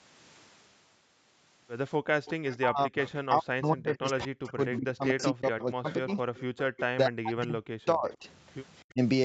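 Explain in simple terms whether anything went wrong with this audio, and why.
Echo leak, from 2.25 to 3.11 s, 4.47 to 6.82 s and 8.13 to 8.52 s: a faint, delayed copy of the talking trails behind it, arriving roughly a quarter of a second late (about 250 ms in the first stretch, about 270 ms in the later two). The last stretch is fainter still. This likely happened because the far end was playing the call on a loudspeaker, and its echo canceller didn't remove everything its microphone picked back up, so that leftover was sent back into the call.

Speech suppressed in double talk, from 2.59 to 6.18 s, 6.94 to 8.26 s and briefly at 8.93 to 9.00 s: the talker's voice sinks, in the worst moments to near silence. The last one is a short, lighter dip. The likely cause is both sides speaking at once. The echo canceller couldn't tell the talker apart from the returning echo, so it turned everything down together.

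Background gated by the echo canceller, from 6.46 to 6.57 s: for about a tenth of a second the room sound drops away sharply, then returns. While the loudspeaker was playing, the echo canceller clamped the microphone down hard and released it a moment later. The gentle fade-in at the start of the clip, from about 2.0 to 2.78 s, is an ordinary edit and not a fault.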